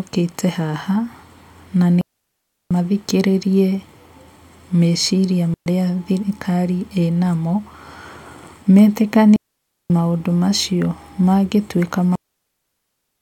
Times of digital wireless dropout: 2.01-2.71, 5.54-5.66, 9.36-9.90, 12.15-13.21

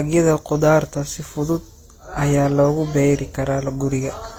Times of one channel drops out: none

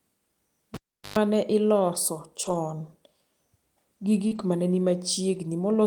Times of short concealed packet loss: 4.27-4.33

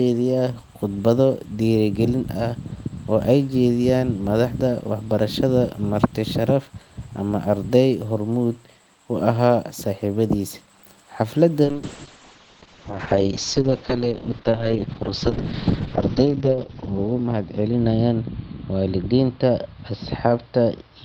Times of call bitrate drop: 11.64-21.04

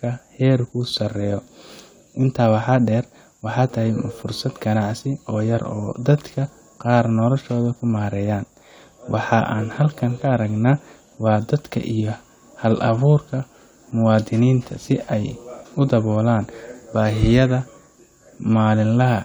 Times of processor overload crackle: none

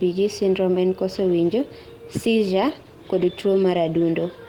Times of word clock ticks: none

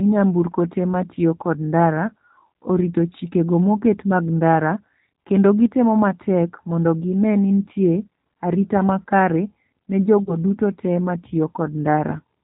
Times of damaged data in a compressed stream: none

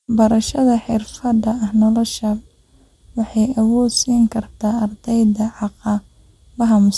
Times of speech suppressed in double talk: none

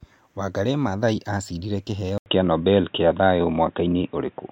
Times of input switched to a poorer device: 2.18-4.52

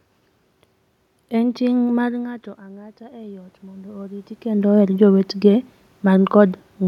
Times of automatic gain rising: 1.40-4.36

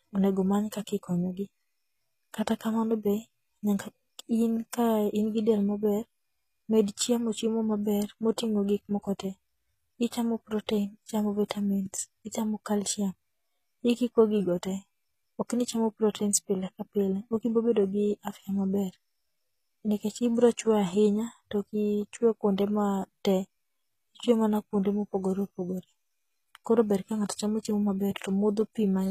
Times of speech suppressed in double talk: none

